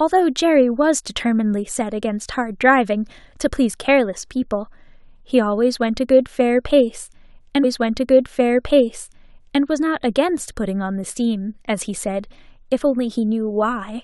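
From 7.63 to 9.63 s, about two seconds of speech plays again after a small blip: a stream segment repeated, fetched or queued twice by the player.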